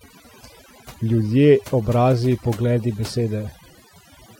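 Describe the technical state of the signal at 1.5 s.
At 1.5 s the speech carries overdone noise removal, present across the whole clip. An over-aggressive noise reducer pulls individual frequency bands far down wherever they sit near its noise estimate, taking quieter speech detail too, leaving a lowered background broken into twinkling specks.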